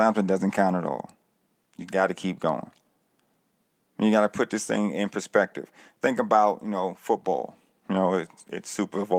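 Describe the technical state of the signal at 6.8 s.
At 6.8 s the speech signal is intact, with no audible fault at that moment.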